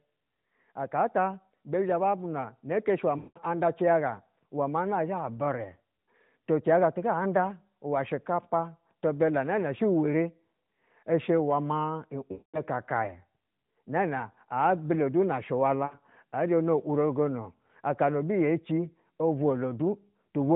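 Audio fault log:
3.18–3.40 s, 12.32–12.60 s, 15.86–15.98 s: lost AMR speech frames. The decoder had nothing valid, so it kept reusing the last good pitch and vocal tract settings at falling gain. The 180 and 220 ms gaps drag out and fade to silence, and the 60 ms one is a quick warble.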